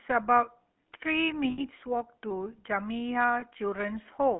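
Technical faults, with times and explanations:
Throughout: GSM full-rate codec. The whole clip has that plainly audible buzzy, gravelly grain you get when speech is squeezed through a vocal-tract model driven by evenly spaced pulses, with most of the fine excitation detail thrown away. The damage fits the 13 kbps GSM full-rate codec. The line band runs from about 200 Hz to 3.5 kHz, so the speech sounds thin at the bottom and dull at the top, with no air above that.
1.50 to 1.61 s and 3.40 to 3.43 s: lost GSM frames. In both spots the decoder had no good data and kept replaying the last good frame's settings, which is why the sound briefly freezes into a rough, metallic ring. The first gap covers about 80 ms, which fits four 20 ms frames. The second covers about 20 ms, a single frame, and is just a quick rasp.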